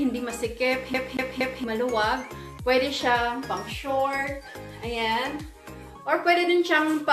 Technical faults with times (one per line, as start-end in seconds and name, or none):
0.94-1.64 CD stuck on one turn